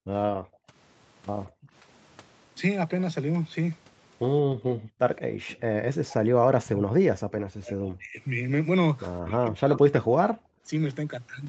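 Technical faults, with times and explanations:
0.0–0.68 s, 1.48–1.73 s, 4.44–5.38 s and 10.46–10.63 s, background gated by the echo canceller: the room tone suddenly falls away, by about 40 dB (about 30 dB in the last one), for a fraction of a second each time, then returns. The echo canceller clamped the microphone while the loudspeaker was playing and released it afterwards.
5.18–5.56 s, echo leak: a faint delayed copy of the talk trails the original by 174 ms, about 25 dB below it. This is likely residual loudspeaker pickup that the far end's echo canceller failed to fully remove and sent back down the line.
5.79–8.19 s and 9.19–10.18 s, speech suppressed in double talk: the talker's speech sinks by as much as about 40 dB, for roughly two seconds in the first stretch and one second in the second. The likely cause is both sides speaking at once, so the echo canceller couldn't tell near speech from loudspeaker echo and suppressed both.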